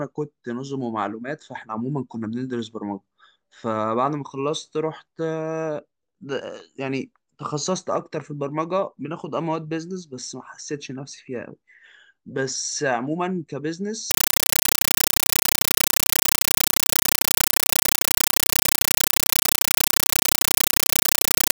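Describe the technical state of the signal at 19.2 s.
At 19.2 s the speech is lost to compressed stream played as audio (14.11 s to the end). Undecoded AC-3 data treated as samples gives loud chattering static. Unlike steady hiss, it comes as 8 ms bursts repeating 31.25 times a second.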